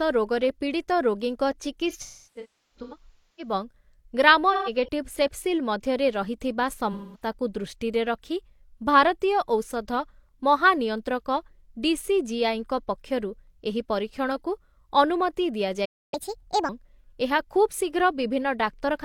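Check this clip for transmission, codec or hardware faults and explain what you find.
Three kinds of fault are audible in this speech clip: AAC frame loss with concealment, a playback stall, and catch-up at higher speed.

AAC frame loss with concealment occurs three times. The worst patch runs from 1.89 to 3.53 s. About 1.15 s of audio is missing, scattered in gaps over roughly 1.5 s, and the longest gap is around 0.3 s. Shorter patches follow at 4.53 to 4.89 s, with about 170 ms missing, and at 6.92 to 7.27 s, with about 210 ms missing. The decoder patches each gap by reusing the last good spectrum. That makes the speech sound smeared, noisy and phasey in those spots.

A playback stall follows at 15.85 s. The audio cuts out mid-flow and stays silent for about 270 ms, until 16.14 s. The likely cause is a player that ran short of data or had its audio thread held up. The output had nothing to play until it recovered. 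The speech then resumes from where it broke off.

Catch-up at higher speed runs from 16.14 to 16.69 s, right after the stall. The player pushes out its backlog at 1.5 times normal speed by resampling. Pitch and tempo rise together, by about seven semitones. The speech sounds hurried and chipmunk-like. Once the lost time is made up, speed and pitch drop back to normal.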